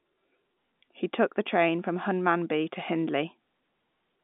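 Nothing stood out on listening to this speech recording, which carries the narrow, telephone-band character of G.711 A-law line coding.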